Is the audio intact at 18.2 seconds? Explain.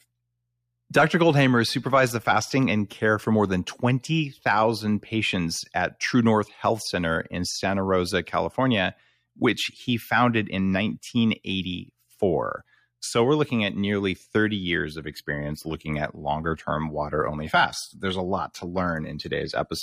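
No. From 15.00 s to the end of the clip, the adaptive stream has dropped to a lower bitrate after the connection slowed, consistent with a switch from mid-rate AAC to low-rate HE-AAC. With no gap, the speech turns abruptly duller, with nothing above 14.9 kHz.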